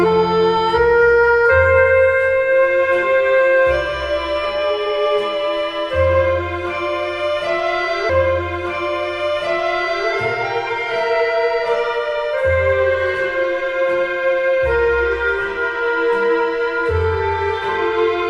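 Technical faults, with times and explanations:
8.09 to 10.09 s, stream segment repeated: the player queued the same 2-second chunk of the stream twice, so playback jumps back and the preceding 2 s of audio plays again in full, adding 2 s to the running time. Because the replayed segment starts from an earlier point than where the sound had reached, the waveform doesn't join smoothly, and a brief blip marks the jump back at 8.09 s before the repeat runs through to 10.09 s.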